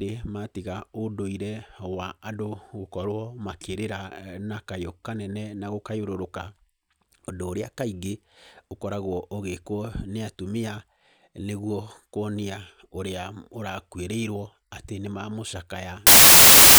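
A speech clip. From 16.07 s to the end, samples built from the wrong bytes turn the audio into loud, harsh broadband noise. Misordered bytes make the low bits dominate each value.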